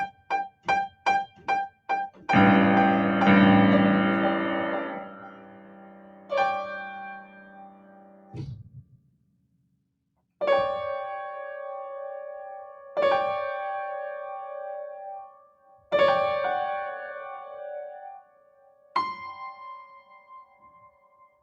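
A noise suppressor built for speech is applied to these sounds throughout. It treats sustained parts as noise, so levels pump and swing by around 20 dB. Sound is cut by the noise suppressor at 0.07–2.27 s, 4.97–10.4 s, 15.31–15.92 s, 17.43–18.95 s and 19.86–21.4 s, where held material and decays sink by about 15–16 dB.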